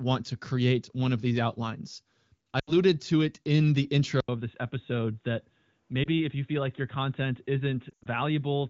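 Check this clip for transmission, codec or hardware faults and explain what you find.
Yes, there are two kinds of fault in this speech, carried over AMR wideband: repeated lost AMR speech frames, and what sounds like an input switched to a poorer device partway through.

Lost AMR speech frames, 2.59 to 2.72 s, 6.03 to 6.08 s and 7.89 to 8.07 s: frames failed their checksum, so the decoder repeated its last good pitch and vocal tract settings at falling gain. The first gap, about 80 ms, fits four lost frames and smears and fades the speech. The second, about 20 ms, gives a brief warble. The last scatters over about 160 ms with an 80 ms run, leaving a choppy, dragged patch.

Input switched to a poorer device, 4.20 s to the end: the input was likely changed to a narrower-band microphone or a headset call profile. After about 80 ms of silence, nothing comes through above 3.8 kHz, so the speech turns dull and boxy. 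It also drops a few decibels and sits over a new noise floor roughly 45 dB down.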